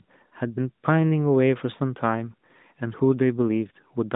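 Nothing in this speech clip is technically wrong. It has passed through an AMR narrowband mobile codec: nothing above about 3.8 kHz survives, and the codec leaves only light damage, which fits the 12.2 kbps mode.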